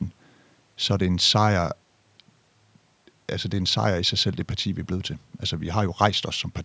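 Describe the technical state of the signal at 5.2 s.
At 5.2 s the speech signal is intact, with nothing there beyond the normal call microphone processing, which trims the lowest bass and leaves no content above 8 kHz.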